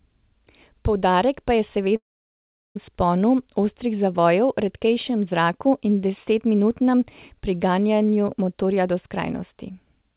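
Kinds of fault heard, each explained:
Long network dropout: At 1.96 s the speech breaks off, and the receiver stretches the last sound into a brief fading buzz. About 0.74 s of near silence follows until 2.77 s. Roughly 0.8 s of speech never returns, most likely from lost packets.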